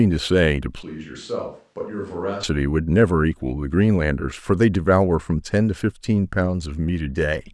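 At 0.83 s the speech abruptly becomes roomy and hollow, thinner in the bass and about 10 dB quieter, with a faint background bed roughly 40 dB below the speech. This switch to a distant microphone lasts until 2.43 s, when the close sound returns just as suddenly. The likely cause is that the close microphone's signal dropped out and a farther one covered the gap. On the waveform the envelope steps down and back. On the spectrogram the low end thins, reverberant smear fills the gaps, and the noise floor rises.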